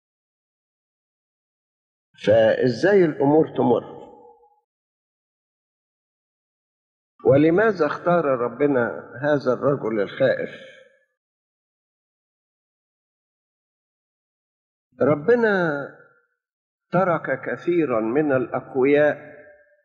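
No faults heard anywhere in the clip.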